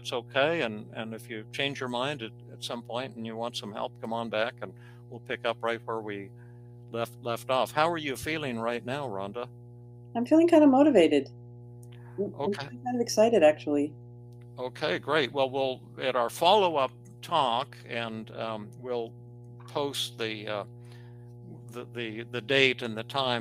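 A steady mains hum sits under the sound from start to finish: a fixed 60 Hz tone with low harmonics, roughly 20 dB below the signal. It comes from power-line current leaking into the audio path, typically through a ground loop or a nearby transformer.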